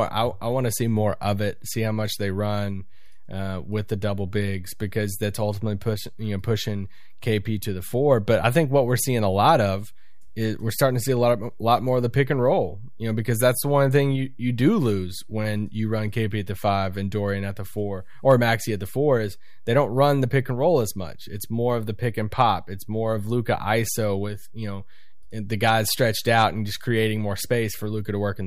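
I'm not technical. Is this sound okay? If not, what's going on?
No, though you won't hear the problem. This speech sounds normal from start to finish, but the whole recording sits slightly off its centre line, a fault called DC offset. That wastes some loudness room and adds a silent, steady push at the lowest frequencies.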